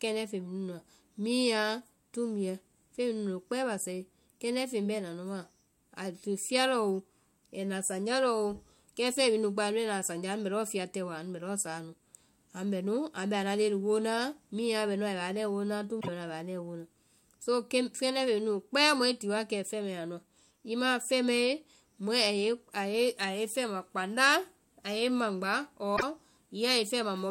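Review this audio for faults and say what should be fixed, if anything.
Damaged data in a compressed stream occurs twice in this speech: from 15.97 to 16.09 s, just after "woo na", and from 25.93 to 26.03 s. Each time the decoder hits corrupted bytes, misreads the frames, loses sync and hunts for the next valid header, producing a brief chirp, squawk, click or short hole of about a tenth of a second. Unlike a plain dropout, which leaves silence or a smoothed gap, this comes from the decoder losing frame sync. Verify file integrity with checksums and re-fetch or re-encode from an undamaged source.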